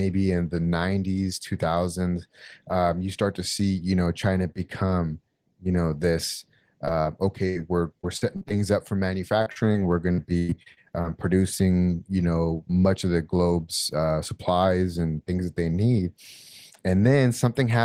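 Right after "become you know this", short concealed packet loss at 6.85–6.89 s and 7.01–7.07 s leaves brief smears where 20 and 40 ms went missing.

A burst of packet loss at 7.49–7.57 s drops about 60 ms. It is held and faded out, which looks like a decaying, smoothed waveform block.

Repeated packet loss (robotic sound) follows at 8.01–8.52 s, ending before "up for", then at 9.42–9.76 s just after "up for", and at 10.12–11.05 s. Gaps of up to 104 ms make the speech choppy, with striped, repetitive spectrogram patches.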